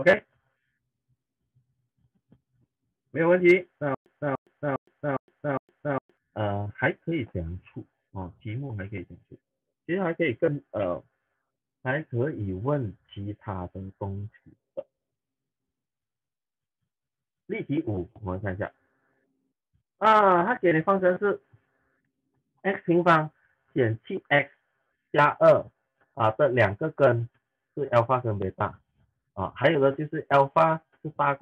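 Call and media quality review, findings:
Stutter with silent gaps, 3.95–6.17 s: one 293 ms burst repeats five times at a 407 ms period, with 114 ms of digital silence between. Likely a stream stall replaying the last fragment, so the underlying audio is lost. Waveform: identical blocks split by flat silent gaps. Spectrogram: repeated columns, blank stripes.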